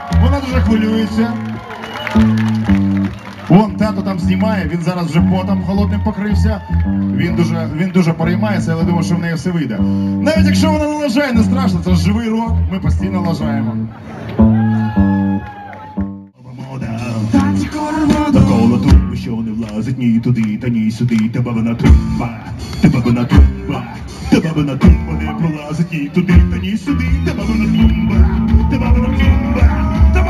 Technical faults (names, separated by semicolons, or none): imaging from linear upsampling